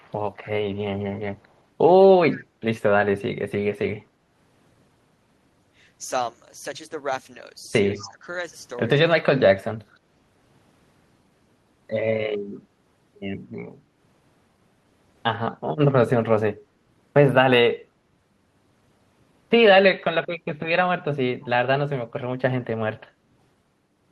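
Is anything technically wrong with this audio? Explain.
Yes. Echo leak appears at 0.0–0.12, 0.44–0.48, 2.32–2.36 and 7.95–8.05 s. Brief, faint copies trail the speech by 208 ms, roughly 25 to 35 dB down. A far-end loudspeaker's echo canceller likely let them through.

Speech is suppressed in double talk at 7.99–8.26 and 9.16–9.57 s. The speech dips by roughly 15 dB, then 30 dB. An echo canceller likely mistook it for echo during overlapping talk.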